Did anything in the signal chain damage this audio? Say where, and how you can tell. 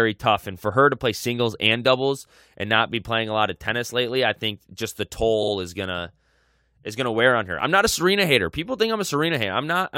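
Yes. Repeated frames at the codec or storage stage: from 5.42 to 5.52 s the speech stutters as a 46.4 ms block plays twice more, adding about 93 ms. The block length points to compressed frames being written or delivered more than once.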